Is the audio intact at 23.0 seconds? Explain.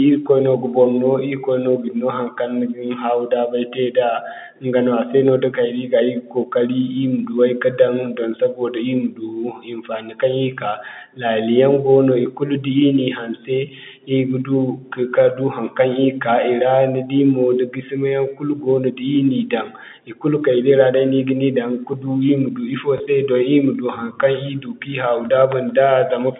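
No. From 22.98 to 23.0 s, packet loss with last packet repeated replays the previous 20 ms, causing a small blip. The waveform shows a duplicated segment.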